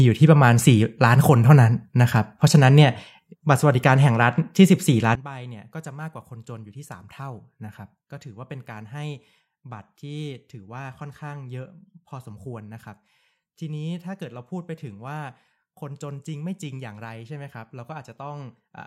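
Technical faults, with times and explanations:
5.15–18.87 s, one channel inverted: one stereo channel has likely had its polarity flipped, so when left and right are summed to mono the content they share cancels instead of adding. From 5.15 s to the end, the centred speech drops by about 20 dB, leaving a faint residue made only of whatever differs between the two channels.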